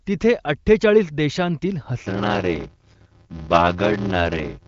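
From 2.02 s, right after "तिथे अठ्ठेचाळीस देशांतील", a block size mismatch (padded) begins and lasts to the end. Each block read downstream is only partly filled. Zeros pad the rest, which fits a 512-sample read block. A buzz sounds at 86.1 Hz. Speech slows to 0.625 times normal speed at about its normal pitch.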